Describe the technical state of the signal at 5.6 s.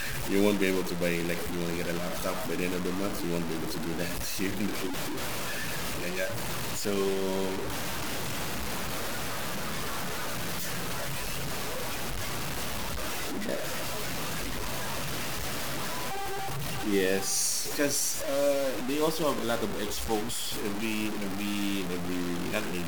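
At 5.6 s the speech is coarse and gritty, as it is across the whole clip, with a grainy distortion almost as loud as the voice itself. The likely cause is low bit depth without dither, truncated to about 4 bits, so the error follows the signal. Unlike steady dithered hiss, this grit changes with the voice and sputters or drops out on the quietest sounds.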